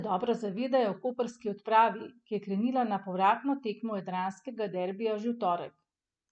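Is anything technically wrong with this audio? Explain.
No, nothing technically wrong turns up here; the speech comes through without any fault to point at.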